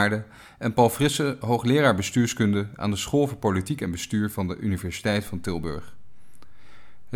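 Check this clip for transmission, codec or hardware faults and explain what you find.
One hardware fault is present in the speech. A DC step at 5.27 s shifts the waveform's zero line by about -35 dBFS, as from a converter recalibrating, and it holds to the end, heard as a single low thump while the speech carries on.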